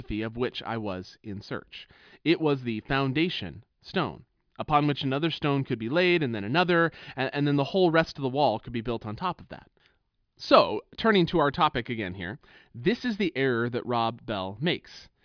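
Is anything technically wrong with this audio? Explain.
No, nothing is technically wrong.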